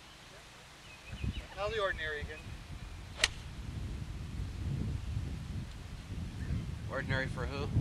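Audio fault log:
No faults heard anywhere in this clip.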